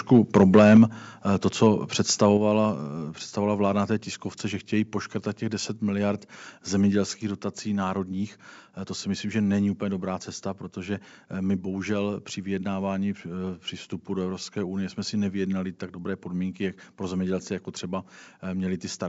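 From 0.13 to 0.83 s the speech shows microphone overload. Peaks run about 5 dB past the converter's limit, so a few percent of samples are sheared flat. This is likely from an input level set too high for the converter. The waveform shows squared-off crests, and the spectrogram shows vertical smears of broadband distortion on the loudest syllables, which sound harsh and crackly.

At 0.77 s the microphone volume is stepped down by about 4 dB in one abrupt move, likely the call software reacting to that clipping. The waveform envelope drops at once and stays lower, and voice and background fall together. The spectrogram dims uniformly across all frequencies, while the wideband band limit near 7.7 kHz stays unchanged.

Microphone overload returns briefly from 2.22 to 2.26 s, this time only about 1 dB over. A few flattened peaks produce a short crackle and a thin broadband streak on the spectrogram.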